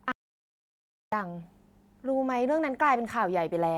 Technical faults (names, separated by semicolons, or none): audio dropout to silence